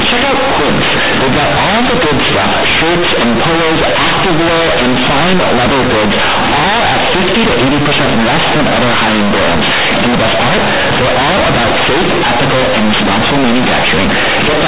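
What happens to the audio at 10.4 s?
A-law telephone bytes are being read as linear 8-bit samples without expansion, the fault of companded audio read as linear, present throughout the clip and so at 10.4 s. Every sign change swings the output across half its range, flattening level differences into loud, buzzy distortion with heavy noise in the pauses.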